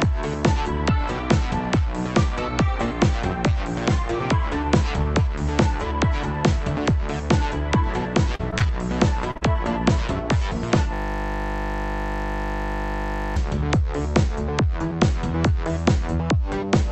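Between 8.35 and 8.67 s the call path dropped or delayed packets over and over, producing repeated packet loss of the robotic kind. Four separate holes, the longest 36 ms and together about 80 ms, were each patched by extending the last stretch of sound before real audio resumed. That leaves about a quarter of this third of a second synthesized, so the sound turns choppy, with small pieces missing.

At 9.31 s and again at 9.37 s come two short concealed packet losses, back to back, each about 40 ms that arrived too late or not at all. In each hole the receiver kept the previous sound going, following its pitch where it had one and using shaped noise where it did not, then crossfaded into the real signal. The pair is heard as a brief smear or wobble lasting roughly a tenth of a second.

From 10.94 to 13.37 s a system hang loop takes over. The machine or its audio driver stalled while the output hardware kept replaying the same ring buffer. 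A 20 ms slice repeats exactly, 121 times, at 50 Hz. At that length the repetition merges into a steady 50 Hz buzz lasting nearly two and a half seconds, in place of the audio that should have continued.

Around these faults, the Opus call path's coding noise and its cutoff near 8 kHz can be heard.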